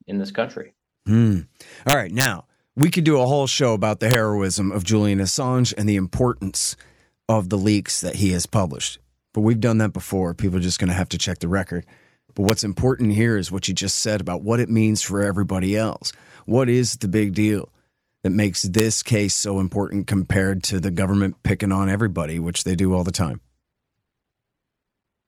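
Integer overflow hits the speech five times. The first is a run of cracks from 1.89 to 2.25 s, where the level pushes about 3 dB past the ceiling. A single snap follows at 2.83 s. Another short burst comes at 4.11 to 4.14 s after "whole show about the", about 2 dB over. Then there are single cracks at 12.49 s just before "important here is what" and at 18.79 s between "big deal that makes" and "case so important compared". Those last two peaks, like the snap at 2.83 s, only just touch the limit. Instead of being held there, each sample that overshoots wraps round to the opposite extreme, so you get harsh, violent cracks that are far nastier than ordinary clipping.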